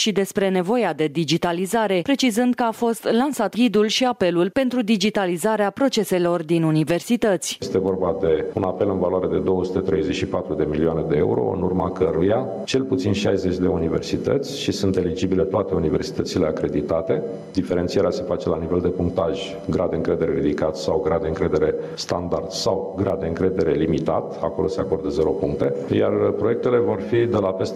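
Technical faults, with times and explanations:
Throughout, gain pumping: the gain is pulled down on loud sounds, a swing of roughly 15 dB, so loud and quiet passages sit unnaturally close in level and the sound feels squashed. The likely cause is input gain set far too high, with a fast limiter or compressor clamping down on each peak. Unlike a noise gate, which cuts quiet parts to silence, this turns the gain down on loud sounds.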